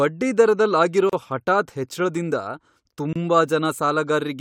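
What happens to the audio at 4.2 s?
Nothing goes wrong at 4.2 s; the speech carries on intact through that moment, with no dropout, click or distortion.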